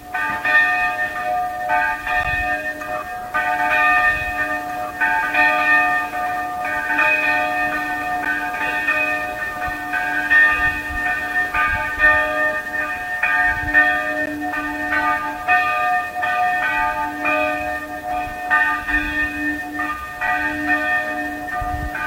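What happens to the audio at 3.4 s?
At 3.34 s a second copy of the sound appears, trailing the original by about two seconds and sitting about 5 dB quieter. It runs until 11.59 s, where it stops abruptly. The copy is full-band and dry, with no decay or room colour, so it sounds like a detached repeat rather than an echo. This is a doubled audio track, likely from the audio being captured a second time through a slower path and mixed back in out of step.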